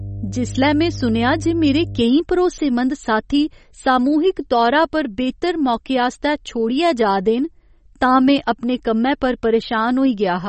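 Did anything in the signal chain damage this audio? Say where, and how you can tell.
Yes. A likely codec stage: MP3 compression runs throughout the speech, with nothing above 8.3 kHz and plainly audible watery, swirly smearing. That fits a low bitrate around 32 kbps, where the encoder cuts the treble and drops weak spectral lines from frame to frame.

Mains hum sits in the analogue wiring from 0.00 to 2.01 s, a steady 50 Hz tone at about -10 dB relative to the signal, ending before "केईं भरोसेमंद साथी सामूहिक". A ground loop or a nearby transformer is coupling the power line into the signal path.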